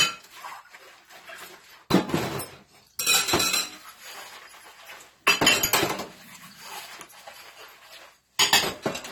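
Throughout, the sound is dull and fizzy with warbling smear, likely from AAC compression at a low bitrate; a spectrogram shows a lowered cut-off.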